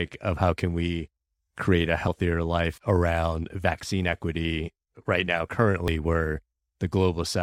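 At 2.08 s, after "can we create a", and again at 5.88 s, after "vaccine equity right now", a dropped buffer (overrun) likely let the hardware overwrite unread samples, so roughly 40 ms vanishes and the speech jumps forward.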